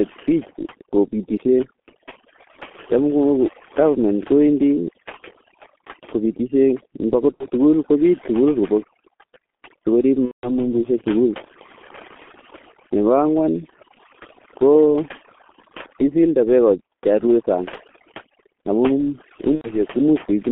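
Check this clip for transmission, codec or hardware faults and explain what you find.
Three faults are present: heavy codec damage, over-strong noise reduction, and three patched-over packet losses.

G.723.1 codec, throughout: the speech went through a very low-rate telephony codec, which fits about 6.3 kbit/s, with the band held between 250 Hz and 3.4 kHz. The model updates coarsely, so the speech is muffled and hoarse and consonants smear heavily.

Overdone noise removal, throughout: a noise suppressor set too aggressively shuts off individual frequency bands near its noise estimate, taking quiet speech detail with them. Pauses drop to near silence sprinkled with twinkling specks.

VoIP packet loss concealed by the speech codec, at 7.35 to 7.47 s, 10.25 to 10.53 s and 19.55 to 19.75 s: missing packets, about 60, 180 and 90 ms of audio, were filled by the decoder extending its last pitch and filter at falling gain. 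The speech smears into a fading buzzy tone or coloured noise, longest at 10.25 s, and stays weak briefly afterwards.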